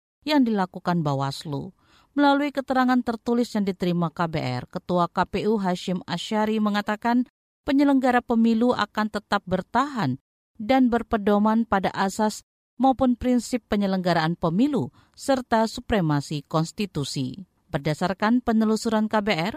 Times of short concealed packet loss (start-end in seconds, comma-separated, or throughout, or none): none